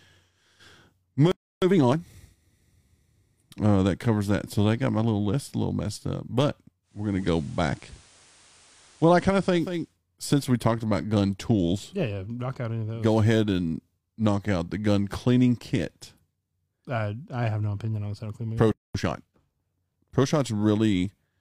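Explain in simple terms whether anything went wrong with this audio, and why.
Playback stall at 1.32 s and again at 18.72 s: the speech simply stops, for about 0.3 s the first time and 0.23 s the second, then carries on where it left off. The likely cause is that the player ran short of data or was briefly held up.

Time-compressed catch-up from 1.62 to 2.22 s and from 18.95 to 19.39 s: right after each gap, the speech rushes along at 1.5 times normal speed without changing pitch. The player is snipping out tiny pieces and smoothing the joins to make up the lost time.

Digital radio blending to analogue from 6.82 to 9.98 s, starting just after "little messed up but" and ending just before "since we talked about": over about half a second the sound slides from the digital signal to the station's FM broadcast. A faint hiss appears and the loudness shifts slightly. At 9.98 s it fades back to digital.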